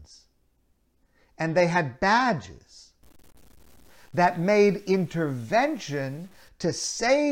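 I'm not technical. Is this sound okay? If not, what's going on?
No. From 3.03 to 6.48 s the speech turns gritty and rough, with quiet parts crackling or dropping out. This is likely low bit depth without dither: the sound was stored with too few levels, about 8 bits, and rounded down. Unlike steady background hiss, this grit rises and falls with the voice.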